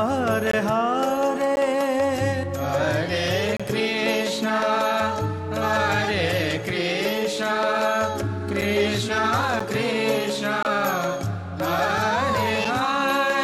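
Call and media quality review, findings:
Gap between stream segments: hard-edged silent holes at 0.51–0.53, 1.56, 3.57–3.60, 8.61, 9.60, 10.63–10.65, 12.65 s, all on 1 s segment boundaries. Packager timestamps leave small gaps, and the player pads them with silence.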